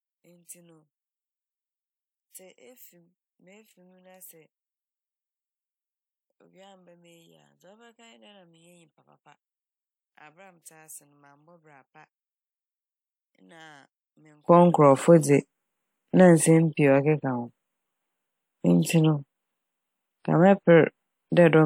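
From the start to 14.48 s, the speech drops about 35 dB, nearly vanishing. The likely cause is one channel inverted, cancelling in the mono sum.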